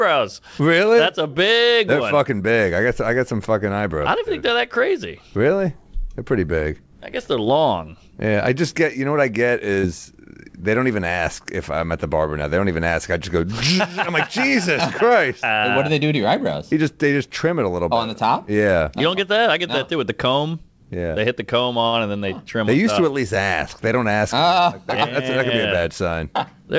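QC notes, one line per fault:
9.74 to 9.79 s and 21.88 to 21.95 s, short stall from a late packet: each time a packet arrived late and the jitter buffer ran dry. The receiver held the last sound for 31 ms and then 52 ms until the packet arrived, then resumed from the same point. Nothing is lost, but the sound lingers and the delay grows by that amount.
9.81 to 9.85 s, short concealed packet loss: 20 ms of audio never reached the decoder in time. The receiver filled the gap by extending the preceding sound and then blended back into the real signal, so a brief smear replaces that moment and whatever was there is gone.
13.12 to 13.45 s and 25.19 to 26.09 s, jitter buffer speed-up: the buffer held more audio than it aims for. To reduce the delay, the receiver cut out short pitch-period pieces several times in a row, about a twentieth of a second in total each time. The sound runs at 111% and then 105% speed without changing pitch.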